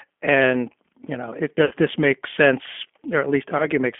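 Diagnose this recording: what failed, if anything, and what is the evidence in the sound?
The whole clip has gone through a low-rate speech codec, and it sounds like G.729. The audio is confined to roughly a 200 Hz to 3.4 kHz line band with nothing on top, and the speech has that slightly rough, synthetic edge you get when it's rebuilt from a vocal tract filter, a pitch predictor and a few pulses per frame. The damage is plainly audible, which fits an 8 kbit/s stream.

There's also VoIP packet loss concealed by the speech codec, a network-stage fault, at two points. From 1.65 to 1.74 s about 60 ms of audio is missing, which fits three lost 20 ms packets. From 3.58 to 3.69 s another 20 ms goes, about one packet. In each gap the decoder keeps repeating its last pitch and filter at falling gain, so the sound smears into a fading buzz or coloured noise. Because each frame builds on the previous one, it stays a bit weak and off for a little while after packets resume.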